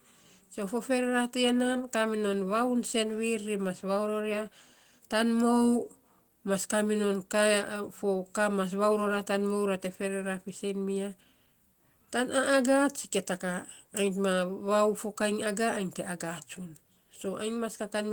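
A speech recording with nothing technically wrong with it.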